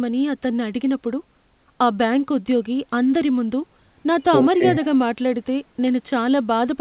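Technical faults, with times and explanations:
No technical faults can be heard anywhere in this speech.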